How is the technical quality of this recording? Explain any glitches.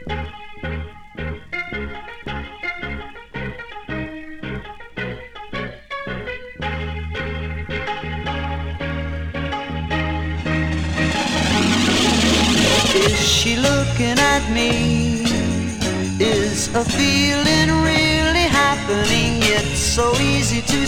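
No technical faults are audible.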